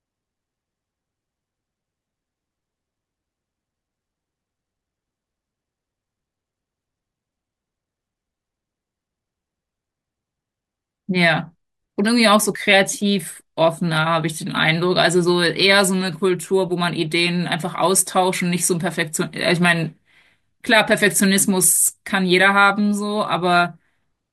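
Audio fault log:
Nothing stood out on listening to the speech here.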